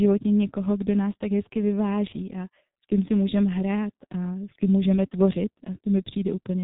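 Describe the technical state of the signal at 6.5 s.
At 6.5 s the speech still carries the G.723.1 codec damage that runs through the whole clip. This early telephony coder rebuilds the signal from 30 ms frames with a slowly updated voice model, so the voice sounds muffled and hoarse and consonants smear together. The heavy degradation fits a bitrate of roughly 6 kbit/s. On a spectrogram, energy stops sharply at 3.8 kHz with nothing above it, and the harmonics look blurred and blocky over time.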